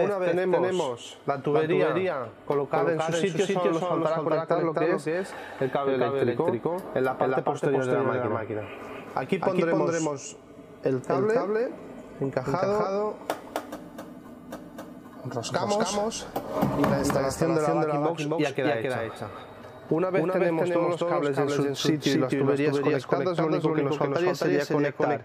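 From the start to the end, there's a doubled audio track: a second full-band copy trails the original by about a third of a second at roughly equal level, with no decay or room colour. It's likely a second capture path or a misaligned edit.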